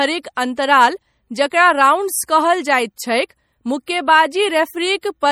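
From start to finish, the speech carries plainly audible MP3 compression damage. The likely cause is a low-bitrate MP3 encode, around 48 kbps. The encoder spends its scarce bits only on parts its hearing model rates as important. Weak frequency lines drop in and out between frames. The result is a watery, swirling texture, with metallic chirps on s sounds. Nothing remains above 20.4 kHz.

Pre-echo appears at 0.35 to 0.37 s, then at 1.50, 2.27, 3.29 and 3.86 s. Each time, a sharp attack sits late in a transform block. The block's quantisation noise, sized for the loud onset, also spills into the quiet just before it. The spread runs about 14 to 20 ms. Each onset is led by a brief hiss and sounds softened and smeared.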